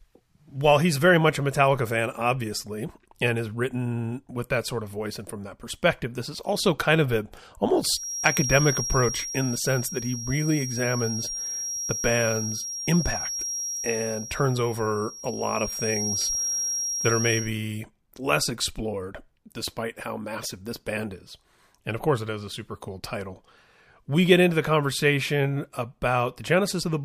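From 7.87 s, just after "also kind of a", to 17.54 s, a feedback whistle runs behind the speech: a thin, steady 5.6 kHz tone about 5 dB below it, swelling and fading slowly in level. The likely cause is a loudspeaker-to-microphone loop held just short of runaway.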